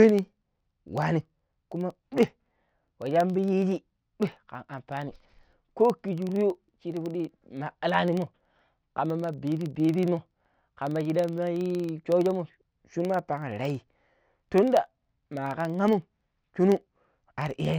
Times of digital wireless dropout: none

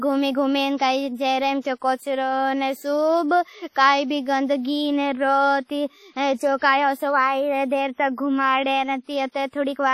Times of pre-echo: 0.77-0.80, 1.61-1.65, 6.58-6.62

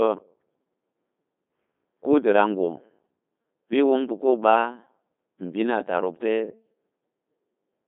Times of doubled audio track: none

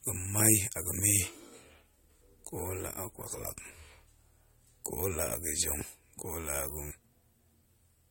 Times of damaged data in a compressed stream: 3.58, 6.90

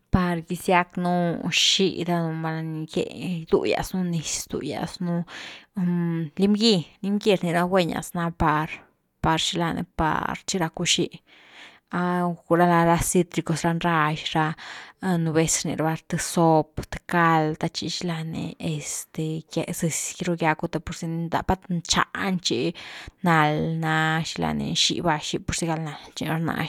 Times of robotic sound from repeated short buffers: none

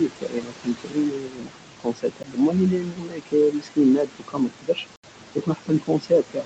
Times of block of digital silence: 2.23, 4.96-5.03

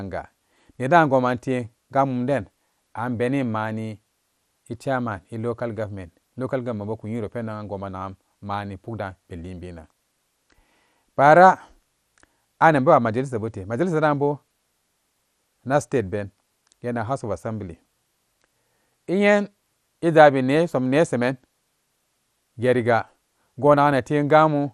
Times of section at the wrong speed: none

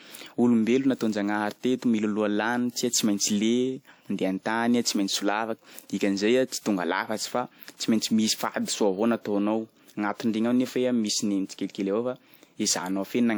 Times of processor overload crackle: none

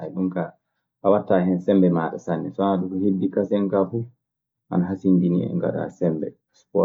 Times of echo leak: none

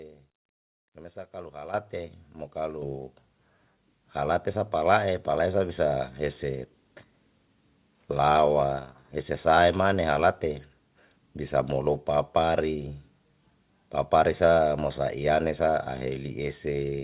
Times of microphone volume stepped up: 1.74, 2.82

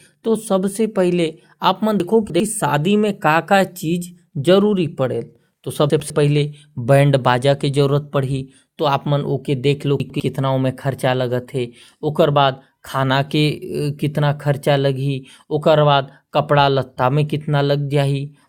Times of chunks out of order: 2.00-2.40, 5.90-6.10, 10.00-10.20

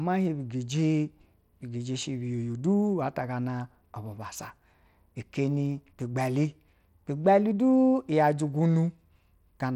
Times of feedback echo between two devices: none

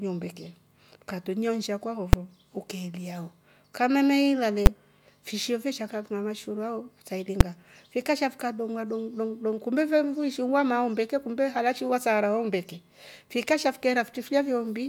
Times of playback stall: none

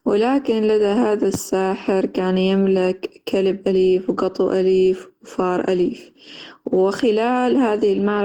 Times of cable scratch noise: none

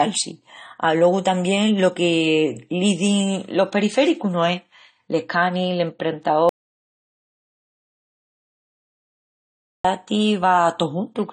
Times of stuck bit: none

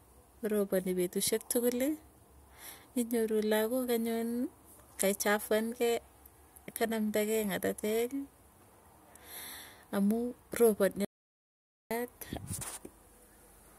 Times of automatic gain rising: none

